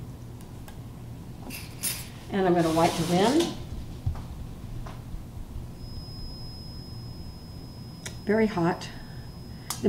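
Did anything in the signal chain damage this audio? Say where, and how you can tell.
Yes. A faint feedback whistle at 5.1 kHz runs from 5.69 s to the end. Likely an analogue loudspeaker-to-microphone loop poised at feedback.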